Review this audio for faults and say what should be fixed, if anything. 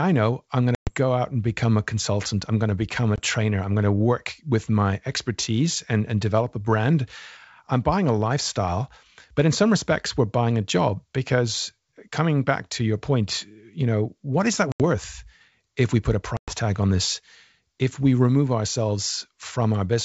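There are four spots of packet loss on an ADPCM call in this speech: at 0.75–0.97 s (120 ms gone), 3.16–3.20 s (20 ms), 14.72–14.81 s (80 ms) and 16.37–16.54 s (110 ms). Each is a hard-edged silent hole. Because the decoder's adaptive predictor and step size lost track of the sender's, the speech comes back with a little grit before settling. The longer gaps sound like roughly ten packets dropped at a time. The G.722 wideband coding underneath sounds clean. To fix it, add a jitter buffer with packet-loss concealment and reset or resync the ADPCM decoder state after a gap.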